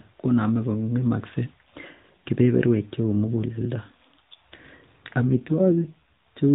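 From 5.22 to 6.01 s there is an AMR rate drop. The narrowband mobile speech turns rougher and more synthetic, which fits a fall from 12.2 to 5.9 kbps.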